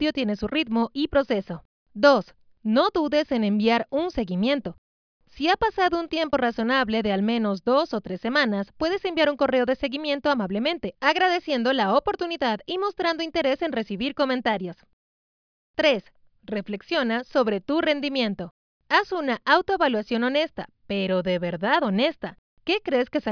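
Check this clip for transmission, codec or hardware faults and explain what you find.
No transmission, codec or hardware fault is audible anywhere in the clip.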